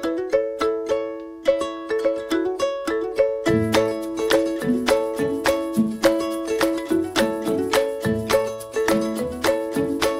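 No technical faults are audible.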